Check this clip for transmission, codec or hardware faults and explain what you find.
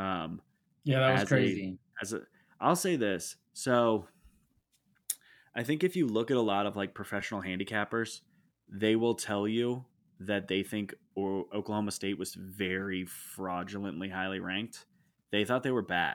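One transmission fault occurs, a repeated buffer at 7.21 s in this speech clip, between "lot of like" and "handicappers they will tell". New audio arrived late, so the playback device played its last block of sound twice more. The fragment sounds three times with a hard join at each repeat. Each block is so short, fitting a buffer of about 5 ms, that the result is a brief click or buzz rather than a stutter. Essentially nothing is lost afterwards, which sets it apart from a dropout.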